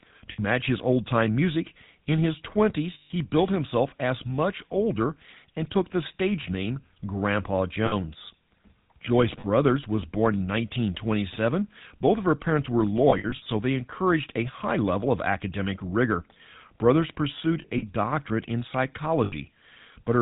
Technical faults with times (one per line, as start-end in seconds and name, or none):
0.00-20.21 GSM full-rate codec
0.32-0.39 lost GSM frames
2.94-3.11 lost GSM frames
7.86-7.94 lost GSM frames
9.40-9.45 lost GSM frames
13.10-13.47 lost GSM frames
17.62-17.83 lost GSM frames
19.24-19.33 lost GSM frames